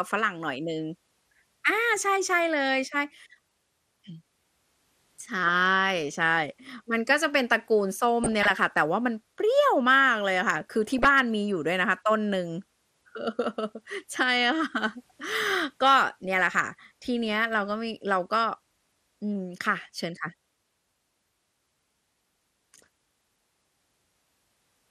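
This speech recording was likely coded with MPEG Layer II (MP2) at a low rate, consistent with about 80 kbps. Starved sub-bands leave it dull, with plainly audible gurgling, granular distortion. DAB burbling occurs from 8.24 to 8.50 s and from 10.98 to 11.11 s: bit errors at a fraction of a percent slip past error correction into the audio data, so short blips of noise appear in single sub-bands over the speech.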